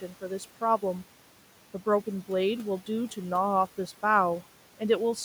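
From 0.01 to 0.23 s, the noise suppressor cuts the speech. The opening sound drops by about 9 dB, so roughly a tenth of a second sounds swallowed and faint. Throughout the clip, noise suppressor artifacts are present. The room noise, about 19 dB below the speech, is pulled down by about 12 dB between words. It rises again under speech.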